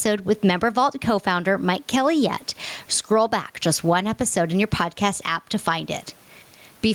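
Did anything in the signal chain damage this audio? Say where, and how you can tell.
Yes. Gain pumping runs throughout: the gain swings around 15 dB, with the faint room noise about 45 dB under the speech. The likely cause is excessive input gain clamped by a fast limiter in call processing. A noise gate would cut the gaps silent, not lift them.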